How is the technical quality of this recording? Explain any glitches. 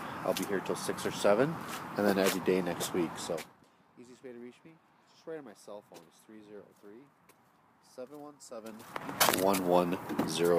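One glitch stands out. Zipper noise appears from 3.25 to 3.62 s. The level falls by roughly 25 dB in steps of about 3 dB, around twenty steps a second, with no smoothing between them. Each step makes a small click. Together the clicks form a ticking, zipping texture on top of the sound as it fades.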